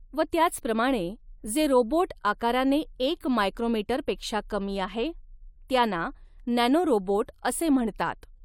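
Listening to this speech recording, nothing technically amiss stood out at any point.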